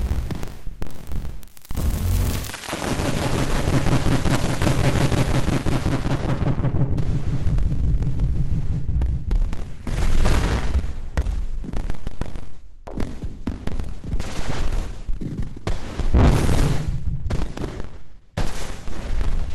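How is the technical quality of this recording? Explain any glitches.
Quality drops sharply early on: from 2.50 s to the end, the audio switches to an adaptive stream at a lower bitrate. The connection slowed, so a lower-quality version was served. Content above 12.1 kHz disappears and codec artefacts thicken, suggesting a shift from roughly 64 to 12 kbit/s Opus. The change is abrupt, with no gap.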